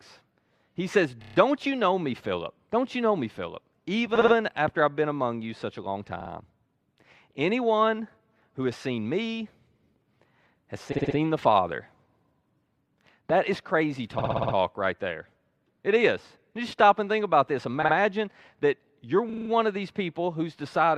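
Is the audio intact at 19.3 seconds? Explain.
No. Repeated frames run from 19.29 to 19.49 s: a 40 ms block of compressed audio was decoded again five extra times, adding 200 ms to the speech. It sounds like a rapid stutter.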